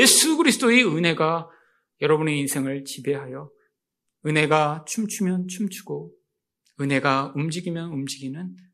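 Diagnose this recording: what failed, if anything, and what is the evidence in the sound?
Nothing in the chain from capture to playback shows a failure, and the speech signal plays with no audible disturbance at any stage.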